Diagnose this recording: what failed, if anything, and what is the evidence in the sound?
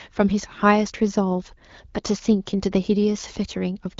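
Nothing stood out on listening, so no stage of the chain shows a failure in this speech recording.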